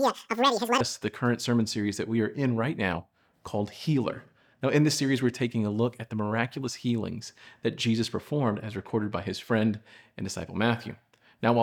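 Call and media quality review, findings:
Audio read two samples at a time (double speed), 0.0 to 0.81 s, before "us to the current". Sample pairs read as one frame. Plays 2x fast, an octave high.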